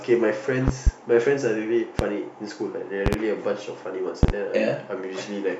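Loud pops hit the speech at 0.68–0.90 s (a double), 1.99–2.03 s, 3.06–3.16 s and 4.23–4.32 s (both doubles). They are sharp transients peaking roughly 20 dB above the signal, the last one slightly stronger, with the speech continuing underneath. Each is likely a voltage spike from a switch, a connector or a driver glitch.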